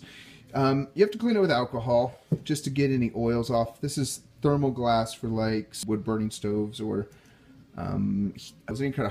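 At 5.83 s and again at 8.71 s, compressed frames are skipped. Around ten frames of roughly 93 ms each, about 0.7 s of audio, never reach the output. The sound jumps forward at each join. A spectrogram shows a sudden content change at each join.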